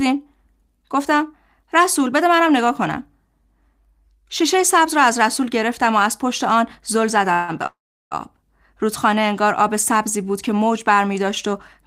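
At 7.33 s the sound stalls for about 150 ms into a fading buzz, then resumes. At 7.66 s a longer stall follows: a brief trailing tone that drops to silence for 360 ms, about 0.45 s in all, before the audio picks up where it stopped with nothing skipped. This is a call audio freeze, likely from packets held up in transit draining the jitter buffer. Each stall pushes the rest of the sound later.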